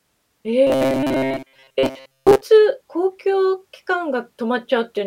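Robotic sound from repeated short buffers, 0.67 to 2.41 s: a rigid 133 Hz metallic buzz, likely from a 7.5 ms buffer repeating over about 70% of that stretch.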